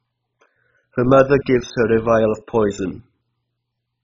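From start to end, nothing remains above 7.3 kHz, and the speech sounds dull, grainy and gurgling as upper sub-bands drop in and out. This is likely heavy MP2 compression at a very low bitrate. A simple low-pass filter would not flicker or coarsen the remaining bands.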